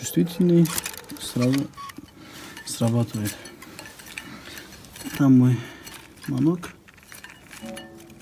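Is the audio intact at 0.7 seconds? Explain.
Yes, at 0.7 seconds the audio plays through intact, with no dropout, click or other fault heard at that point.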